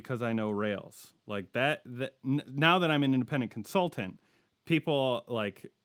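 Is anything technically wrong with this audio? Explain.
No, nothing technically wrong stood out on listening to this speech recording.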